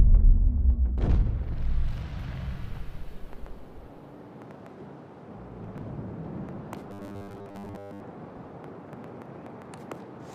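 From 6.91 to 8.01 s a rigid metallic buzz at 100 Hz sets in: robotic sound from repeated short buffers, likely from late-arriving audio forcing a 10 ms chunk to loop through most of that stretch. A spectrogram shows evenly spaced 100 Hz harmonics, and the waveform shows identical repeating cycles.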